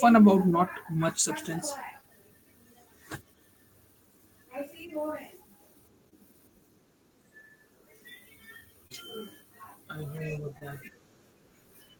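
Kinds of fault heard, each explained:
Short concealed packet loss: 20 ms of audio went missing at 6.09, 8.87 and 10.59 s, and the receiver bridged each hole by continuing the preceding sound, giving a brief smear instead of the silent gap an unconcealed dropout leaves.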